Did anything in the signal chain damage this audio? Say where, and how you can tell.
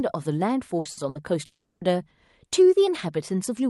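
Yes, the damage is at the network stage, in the packet delivery to the call receiver. The Opus path itself sounds intact, with its top end stopping around 12 kHz.

Three bursts of packet loss fall close together, at 0.79–0.88 s, 0.91–1.00 s and 1.09–1.18 s. In each, the speech turns into a held, decaying buzz or hiss for about 60 ms, then jumps ahead with roughly 60 ms of material skipped. That is the jitter buffer's concealment extending the last frame while consecutive packets were missing, and playback resuming at a later point.

From 1.45 s to 1.84 s the sound again smears into a fading extrapolated tone, then drops to about 180 ms of near-silence before speech returns further along, with about 360 ms of content gone. A concealment tail decaying into silence is the signature of a long network dropout, most likely a stall in packet arrival that outlasted what the receiver could plausibly synthesise.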